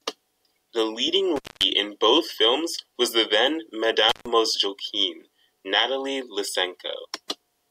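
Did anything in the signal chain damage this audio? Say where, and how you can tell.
Yes. The speech drops out twice, from 1.36 to 1.63 s and from 4.09 to 4.28 s, with crackle at each edge and faint hiss between. That is intermittent contact in the analogue wiring: a loose cable or plug opening for 222 ms, then 138 ms.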